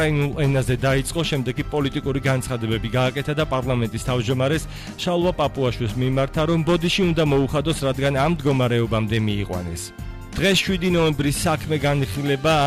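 No technical faults are audible.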